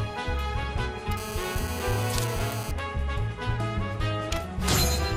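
From 1.17 s to 2.71 s a hard, raspy buzz sits under the audio at about 217 Hz, rich in harmonics and unrelated to the signal, roughly 10 dB below it. This is GSM phone buzz: a nearby 2G phone's transmit bursts, rectified by the audio circuitry, held steady as during a call.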